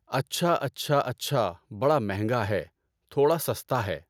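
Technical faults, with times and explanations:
No technical faults are heard in this speech clip.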